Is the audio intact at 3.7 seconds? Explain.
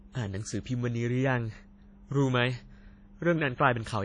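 No. At 3.7 seconds the speech carries the same damage heard throughout the clip: WMA compression is the likely cause. Nothing is present above 10.1 kHz, so the top end sounds dull. The transform codec spreads its quantisation noise over tens of milliseconds, so the sound rings and turns washy. Faint detail has been zeroed out. A hiss rises and falls with the signal. The damage is plainly audible, which fits a low bitrate around 32 kbps.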